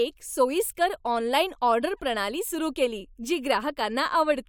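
No technical faults can be heard anywhere in this recording.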